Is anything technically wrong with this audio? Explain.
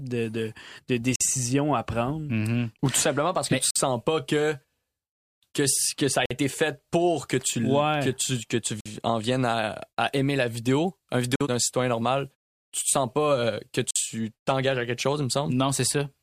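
Yes, the speech has a gap between chunks: 50 ms silences at 1.16, 3.71, 6.26, 8.81, 11.36 and 13.91 s, for example after "que que ça a" before "été fait pour que", and after "aimer la vidéo un" before "d'un citoyen normal". The audio plays in 2.5 s blocks with silence inserted at each join. Unlike packet-loss dropouts, no speech is missing and the holes fall at an exact, regular interval.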